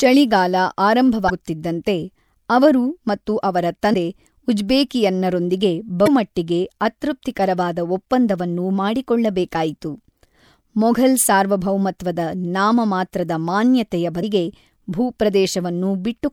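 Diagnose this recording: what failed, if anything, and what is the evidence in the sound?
The failure is at the codec stage: damaged data in a compressed stream. Short glitches break the speech at 1.26–1.30 s, 3.93 s, 6.04–6.08 s and 14.20–14.24 s. The decoder misreads corrupt frames, loses sync and resumes at the next header. Unlike a plain dropout, each glitch comes from lost frame sync in the decoder rather than from missing samples.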